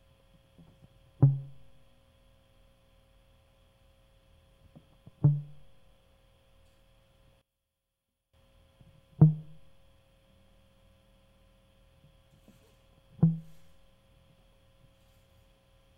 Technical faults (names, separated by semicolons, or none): one channel inverted